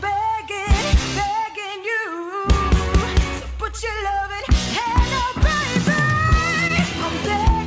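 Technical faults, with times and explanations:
4.84–4.88 s and 6.68–6.71 s: short stall from a late packet. Each time a packet arrived late and the jitter buffer ran dry, so the receiver held the last sound for about 17–18 ms before resuming where it left off. Nothing is lost, but the sound briefly sustains with a slight buzz or dip, under the G.722 call codec's 8 kHz band limit.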